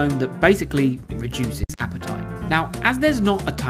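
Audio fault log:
1.63–1.92 s, phantom power thump: a deep, low thud lands here, the kind you get when phantom power or another supply gets switched on or off while the input is live. That sudden DC step pushes through the coupling capacitors and comes out as one big low-frequency push, then settles away with a decay of around 64 ms, so it's gone well before the window closes, leaving the sound carrying on after it.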